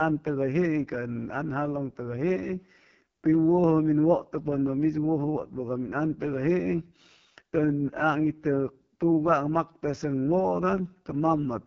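Throughout the speech, an AMR wideband (HD Voice) codec runs at what sounds like its lowest rate, fitting 6.6 kbit/s. The heavily starved vocal-tract model leaves the speech rough and raspy, and nothing is heard above about 7.5 kHz.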